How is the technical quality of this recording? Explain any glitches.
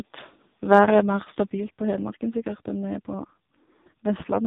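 The recording is poor: the whole clip passes through a heavily compressed mobile speech codec, and the opening seconds sound as though they came through a different input.

AMR narrowband mobile codec, throughout: This 2G/3G phone codec rebuilds the voice from a vocal-tract model driven by sparse pulses in each short frame. Here nothing above 3.8 kHz survives, and the heavy damage, consistent with a bitrate near 5 kbps, makes the speech buzzy, muffled and synthetic.

Input switched to a poorer device, 0.0 to 1.5 s: The first 1.5 s likely came from a different microphone before the input changed. That stretch sits at a modestly different level and carries a faint noise floor well below the speech. The change happens without any silence.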